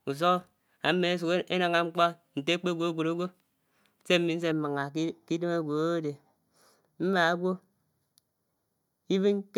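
From about 4.52 s to the end, the speech turns hollow and phasey: channel delay (comb filtering). One channel lags the other by roughly 0.2 ms, so summing to mono cancels evenly spaced frequencies, with the first notch near 3 kHz, dulling the upper presence.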